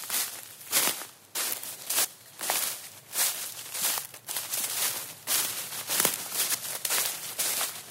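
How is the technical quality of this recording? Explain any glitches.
The recording has one audible glitch, at 4.30 s, where a short stretch of the sound goes missing. The likely cause is audio missing between chunks: the system handles the sound in blocks, which here points to 2.5 s chunks, and drops a piece, roughly a third of a second, while one block closes and the next opens. What distinguishes it from an ordinary dropout is that no silence fills the hole. The material on either side is butted together, so the sound jumps abruptly forward.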